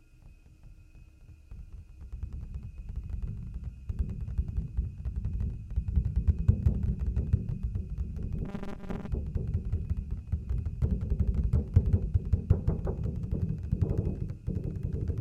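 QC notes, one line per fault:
8.45–9.08 s, robotic sound from repeated short buffers: the audio collapses into a rigid metallic buzz fixed at 200 Hz, a 5 ms chunk repeating while about half the real audio is skipped, likely from starved delivery.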